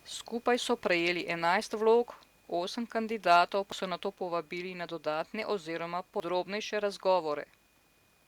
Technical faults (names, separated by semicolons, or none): microphone overload; dropped buffer (overrun)